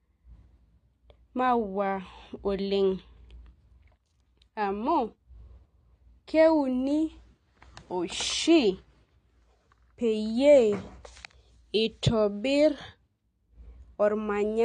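Speech runs with AAC compression damage from start to finish: nothing is present above 9.6 kHz, and sibilants and sustained vowels carry a fizzy, warbling smear, which likely comes from AAC-LC at a low rate that fits about 32 kbps. A simple low-pass filter would dull the top end but leave the remaining band clean. Here the texture itself shifts frame by frame as the coder starves bands.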